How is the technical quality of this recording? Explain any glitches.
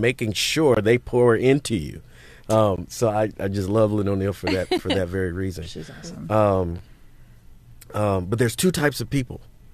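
The speech is interrupted four times by gaps between stream segments. The first runs from 0.745 to 0.767 s, and the others fall at 2.76, 4.78 and 6.78 s, roughly every 2 s. Each time, the timestamps of consecutive 2.0 s segments leave a small hole that the player fills with silence, adding 21.2, 16.5, 10.6 and 9.3 ms respectively. The result is a brief, hard-edged dropout. Nothing is missing from the speech; the surrounding audio simply resumes after the pause.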